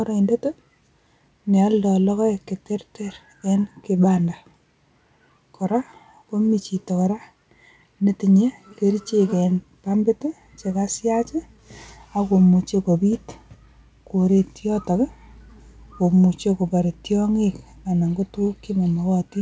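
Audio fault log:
No faults found; the audio has gone through a WebRTC call path and carries nothing above 8 kHz, a band limit that fits a G.722 codec at 64 kbps.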